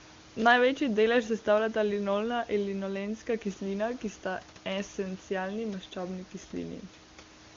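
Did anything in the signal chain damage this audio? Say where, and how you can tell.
No, nothing in this speech recording stood out as damage from any stage of the signal chain on listening.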